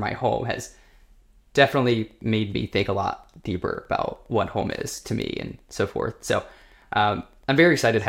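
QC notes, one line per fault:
1.59–8.09 s, Wi-Fi interference: a faint, steady ticking under the speech, roughly 40 dB below it, repeating every 102.4 ms, close to ten ticks a second. A nearby Wi-Fi radio's regular beacon transmissions are being picked up and rectified by the audio circuitry, so each beacon becomes a short click. On a spectrogram this shows as evenly spaced thin vertical lines across a wide frequency band. The waveform shows small periodic spikes at the same spacing.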